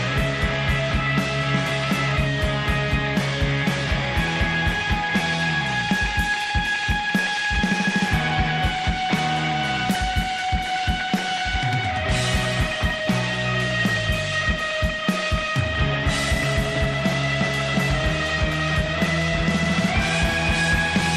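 Nothing in the sound stood out as a technical problem on listening.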